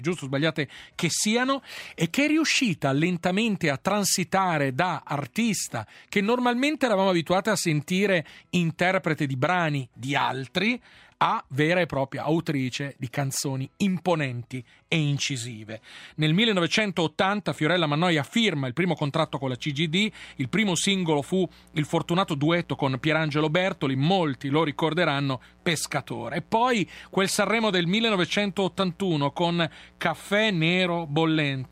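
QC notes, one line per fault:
19.2–31.7 s, mains buzz: a steady, raspy buzz enters and runs to the end, sitting roughly 30 dB below the sound. Sharp switching spikes twice per 60 Hz cycle spread harmonics into the kilohertz range, unlike a smooth, low mains hum.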